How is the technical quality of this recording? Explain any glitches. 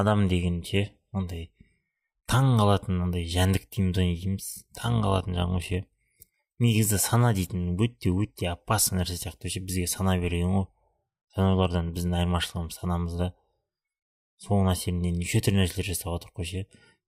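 One glitch affects the speech. From 4.5 to 5.75 s there is overlap-add ripple: mismatched frame overlap pulses the level by about 6 dB near 50 Hz. It sounds like a robotic flutter, and the waveform envelope shows evenly spaced dips.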